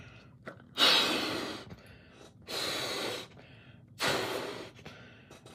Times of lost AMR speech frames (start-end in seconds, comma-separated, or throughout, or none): none